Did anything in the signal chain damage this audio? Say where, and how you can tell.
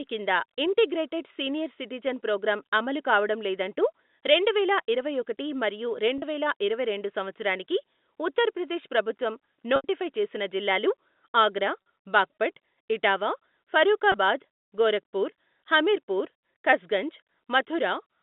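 Yes, at the network stage. Four short gaps show packet loss with pitch repetition. The last pitch period is looped to fill the hole, so the shorter gaps sound like a brief buzzy hold. The first runs from 6.18 to 6.22 s, after "రెండువేల ఇరవై ఒకటి మరియు". The longest, 80 ms, runs from 9.76 to 9.84 s, before "చేసిన జిల్లాలు ఆగ్రా బాగ్పట్". The others fall at 11.82 to 11.86 s and 14.12 to 14.14 s. The gap lengths fit 20 ms packets. The G.711 telephone band is still audible around the repairs.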